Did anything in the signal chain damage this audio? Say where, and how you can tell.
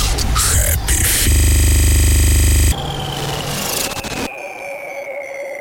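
Yes. From 1.32 s to 2.72 s there is a system hang loop at the driver or buffer stage. One 40 ms slice repeats identically about 35 times, so it sounds like a steady buzz at 25 Hz rather than a stutter. The host stopped refilling the buffer while the hardware kept replaying it. This differs from a dropout, which leaves silence, because the same audio repeats. About a second and a half of the original sound never arrives.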